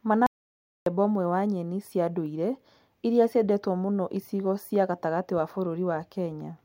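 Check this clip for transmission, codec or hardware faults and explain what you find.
One fault is present. An audio dropout to silence runs from 0.27 to 0.86 s. The input was likely lost while recording continued. About 0.6 s becomes dead silence, without room tone.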